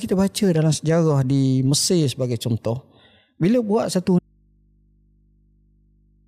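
Speech that suffers an audio dropout to a faint residue from 4.19 s to the end: the signal cuts abruptly to hum roughly 40 dB down, likely a lost source feeding a live input.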